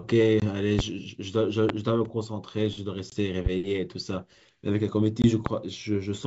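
At 0.40, 3.10 and 5.22 s, packet loss on an ADPCM call leaves a hard-edged 20 ms hole, roughly one packet, where the waveform drops to flat silence. The decoder's predictor and step size have drifted from the sender's, so the speech resumes with brief, slight distortion, visible as a short smear before it settles.

Loud pops at 0.79, 1.69, 3.46 and 5.46 s, likely from a voltage step such as a plug or switch, show as tall spikes, roughly 20 dB (about 15 dB at 3.46 s), with vertical broadband stripes, while the G.722 speech continues underneath.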